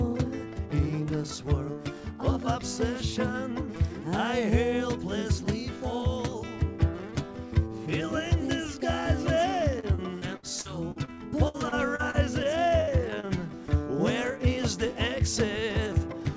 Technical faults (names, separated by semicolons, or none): repeated packet loss (robotic sound); jitter buffer speed-up